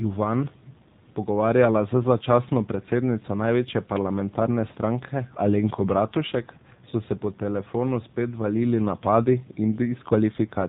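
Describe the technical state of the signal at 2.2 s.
At 2.2 s the speech is passing through the AMR narrowband mobile codec, as it does throughout. Sampling at 8 kHz removes everything above 4 kHz. The low bitrate, which fits about 7.4 kbps, makes the vocal-tract model sound plainly buzzy and synthetic.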